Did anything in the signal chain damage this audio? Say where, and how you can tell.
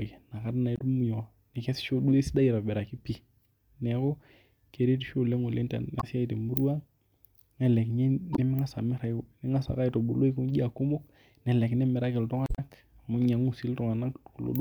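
Yes. Damaged data in a compressed stream, at the codec or storage stage: short blips at 0.76–0.81 s, 5.99–6.04 s before "siai te murua", 8.33–8.39 s, and 12.45–12.59 s after "kumok nelelek imiraki". The decoder misread the corrupt frames, lost sync and had to find the next frame header.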